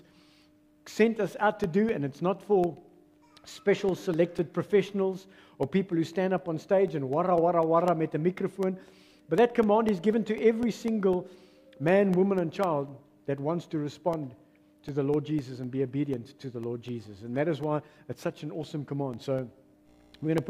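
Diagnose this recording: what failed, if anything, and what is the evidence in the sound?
Periodic USB or driver dropouts run from 1.39 s to 20.38 s. About every 0.25 s a tick cuts into the sound, roughly seventy in all, each a gap of around a millisecond filled with silence. The stage is the driver or buffer: something blocks the USB bus or audio driver on a fixed schedule, so a sliver of samples never arrives and a brief hole is left. The ticks are audible only where signal is present.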